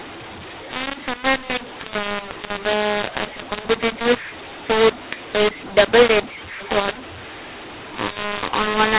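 From start to finish the speech sounds harsh and gritty, its loudness jumping unevenly, with pauses filled by hiss instead of silence. This is a mu-law and A-law mix-up: telephone audio coded as mu-law was decoded as A-law, scrambling every sample's level.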